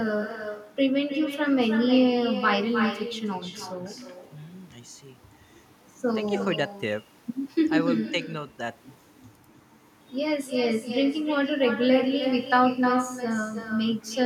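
Throughout, echo with no canceller: unremoved loudspeaker pickup returns speech roughly a third of a second later, about 10 dB down, as faint, offset spectrogram copies.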